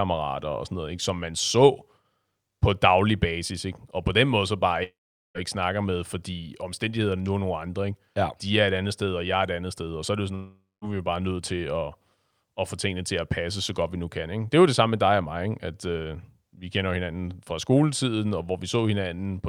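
At 4.83 s, after "den måde så bare", the speech breaks off until 5.38 s. The last sound smears into a fading buzz, then about 0.43 s of silence. Speech resumes at "ikke snakker med fordi", with roughly 0.52 s lost. At 10.35 s, after "så er det jo", it happens again until 10.88 s. About 0.48 s is missing, with 0.21 s of silence before "er vi jo bare". Each is likely a long network dropout.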